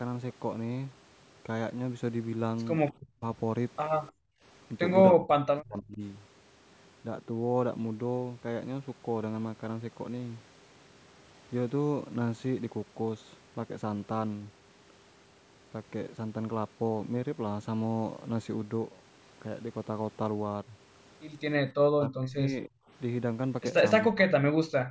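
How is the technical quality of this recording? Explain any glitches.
The recording has the typical problems of a hands-free call, with echo-canceller side effects clustered around 4 to 6 seconds and again near the end.

Echo leak, 4.07 to 4.12 s: a brief, very faint delayed copy of the speech, roughly 35 dB down, arrives about 297 ms after the original. This is likely residual loudspeaker sound that the far end's echo canceller failed to subtract from its microphone and sent back down the line. It comes through as a scrap lasting only about 50 ms.

Background gated by the echo canceller, 4.12 to 4.42 s and 24.84 s to the end: while the loudspeaker was active, the canceller clamped the microphone path. The room tone sinks by about 31 dB for roughly 300 ms in the first case. In the closing 70 ms it drops by about 20 dB. Each time, the ambience briefly dips away instead of continuing smoothly.

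Speech suppressed in double talk, 5.14 to 6.02 s, 21.96 to 22.8 s and 24.07 to 24.56 s: both ends were likely talking at once, and the canceller, unable to tell the local talker from the echo, turned everything down. The speech sags by around 30 dB in the first two stretches and around 40 dB in the third, over roughly 700, 700 and 400 ms. It sounds ducked and partly cut away. The normal call high-pass and the 8 kHz bandwidth limit are separate from these faults.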